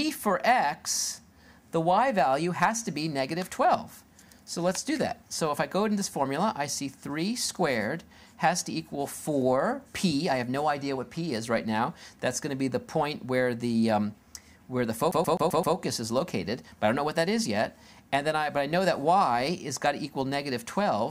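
At 15.11 s the CD gets stuck on one turn. The laser is thrown back a track at the same point each revolution, so a 129 ms slice of sound repeats five times until 15.76 s, broken by brief mutes into a fast, even stutter.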